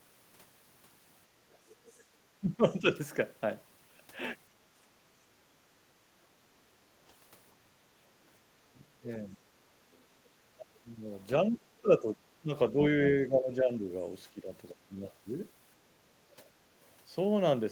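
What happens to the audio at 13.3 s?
At 13.3 s the speech is within a speech suppressed in double talk span (10.55–15.01 s), likely an echo canceller turning down both talkers. The waveform shows dips of up to about 15 dB.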